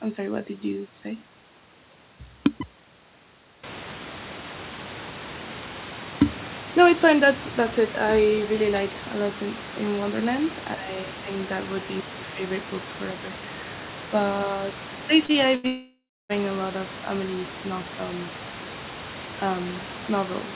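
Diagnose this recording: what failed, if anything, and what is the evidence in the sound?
Network stage, short concealed packet loss. About 30 ms went missing twice in a row, 15.26 to 15.37 s. The receiver extended the preceding sound, leaving a brief smear.

Network stage, burst of packet loss. About 90 ms vanished at 15.55 to 15.67 s. The last sound was continued and turned down before the audio resumed further on.

Long network dropout, likely from the network. From 15.67 to 16.32 s, about 630 ms is lost. The concealment fades, leaving roughly 0.3 s of silence before the audio returns.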